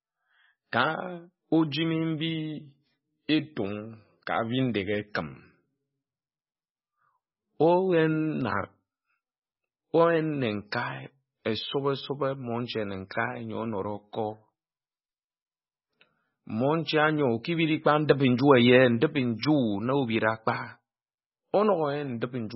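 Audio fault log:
Throughout, MP3 compression: the encoder likely ran far short of bits, at a level that fits a very low rate of about 16 kbps, so it discarded all content above 5.6 kHz and zeroed many weak frequency lines that then flicker on and off between frames. The speech sounds dull and band-limited, with a heavy watery, swirling texture, metallic chirping on s sounds, and consonant onsets smeared rather than crisp.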